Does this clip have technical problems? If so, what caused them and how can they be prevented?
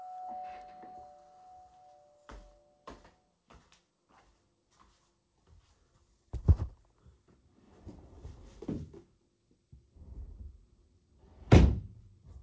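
No, this clip has no technical problems.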